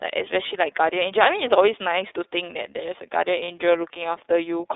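iLBC codec, throughout: The speech has been through the iLBC narrowband codec, which codes each frame's excitation independently instead of predicting from the previous frame. The band is limited to roughly 300 Hz to 3.7 kHz, so everything above that is missing, and the coding damage is plainly audible as a rough, slightly synthetic grain on the voice. The frame timing fits the 30 ms mode at 13.33 kbps.

Lost iLBC frames, 3.44 to 3.48 s: A 30 ms gap, which fits a single lost 30 ms packet, is filled by the decoder's concealment. The decoder repeats the last pitch cycle it received and mixes it with noise, so the dropout sounds like a briefly held, faintly buzzy vowel. Because each iLBC frame stands alone, the voice returns to normal almost immediately after 3.48 s.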